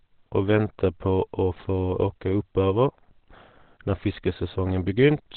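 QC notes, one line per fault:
Throughout, Opus compression: the speech is boxed in, with nothing at all above about 4.2 kHz, so it comes across muffled and hoarse, like an old phone line. The damage is heavy and constant rather than swirly. That narrow band and rough texture point to the encoder likely dropping into its SILK speech mode at a very low rate, something around 12 kbps, where it trades treble and detail for a bare-bones voice model.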